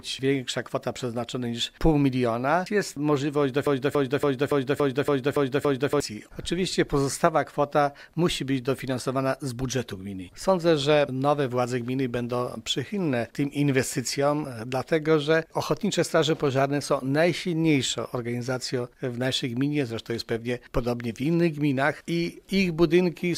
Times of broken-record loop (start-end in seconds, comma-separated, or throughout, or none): 3.67-6.00